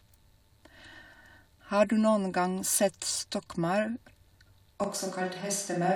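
At 4.84 s the speech turns suddenly roomy and hollow, thinner in the bass, through to the end, likely a switch to a distant microphone.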